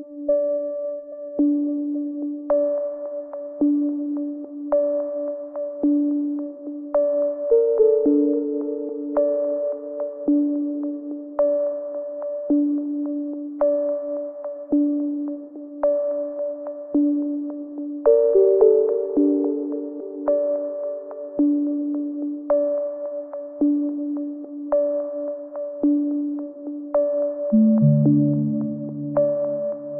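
No technical faults are audible anywhere in the recording of sounds.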